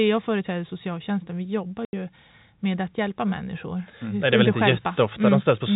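At 1.85 s, right after "företräder socialtjänsten vi jobbar", packets were lost and the receiver filled the gap with silence, which is packet loss filled with silence. The speech drops out for 80 ms, which fits eight 10 ms packets, with hard edges against the band-limited telephone sound.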